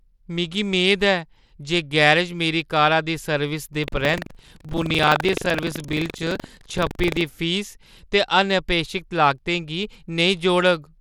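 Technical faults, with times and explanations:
Throughout, Bluetooth SBC compression (likely cause): the speech has plainly audible grit and unstable treble. Coarse sub-band quantisation, consistent with a low bit rate near 96 kbps, starves the upper bands. On a spectrogram the top flickers in blocks and ends at a flat ceiling.
3.80 to 7.25 s, buffer tearing: a robotic 23.4 Hz buzz rides on the speech, which fits a 2048-sample buffer. Writer and reader cross inside each period, so roughly a tenth of every buffer replays audio about 100 ms old. The waveform shows regular hard joins, and the spectrogram shows vertical lines at that rate.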